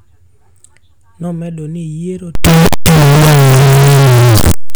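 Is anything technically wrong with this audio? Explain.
Yes. From 2.35 s to the end of the clip, the speech shows a float read as integer fault. The sound turns abruptly very loud and harsh. The waveform collapses into a near-square shape at an almost fixed, high level. Background noise becomes as loud as the speech, yet the pitch can still be followed. The likely cause is 32-bit float samples being read as 32-bit integers. Their sign and exponent bits then dictate the level, regardless of how quiet the original was.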